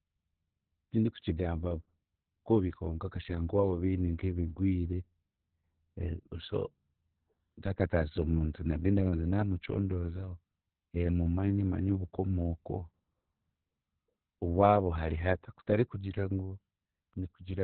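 Opus voice compression runs through the whole speech clip. Nothing is heard above about 4.3 kHz, so the speech sounds muffled, like a narrowband phone line. The damage is heavy. The speech is hoarse and slightly robotic. Opus has dropped to its SILK linear-prediction mode and codes the excitation very coarsely. This fits a bitrate near 6 kbps, with long frames of about 60 ms.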